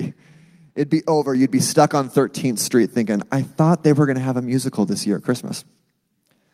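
At 1.35 s the microphone volume stepped up by about 5 dB, then again at 2.37 s by about 3 dB. Each time the call software raised the device's input level in a single step, so the speech and background noise jump louder together.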